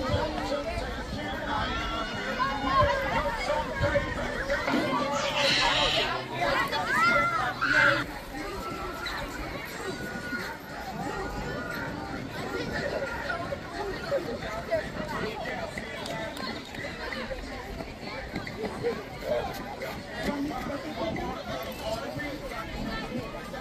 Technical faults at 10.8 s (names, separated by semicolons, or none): digital radio blending to analogue